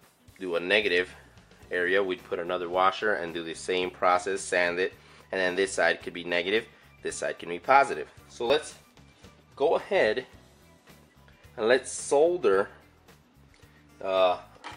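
At 8.5 s the sound jumps forward abruptly. About 30 ms is missing, with no gap of silence. The two sides are simply butted together. This is likely a dropped buffer (overrun): the program fell behind, and the hardware overwrote samples before they were collected.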